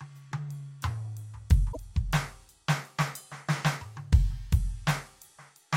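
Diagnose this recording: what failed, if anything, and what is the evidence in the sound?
Damaged data in a compressed stream at the codec stage: corrupt frames from 1.69 to 1.77 s throw the decoder out of sync, producing a brief disturbance in the music.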